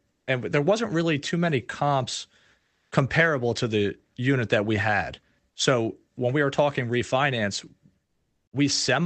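Comfort noise replaces the background in the pauses at 0.11–0.27 s, 2.59–2.91 s and 8.07–8.47 s: a steady, featureless hiss, about 3 dB quieter in the first gap, then about 8 dB and 12 dB louder, likely from Opus DTX.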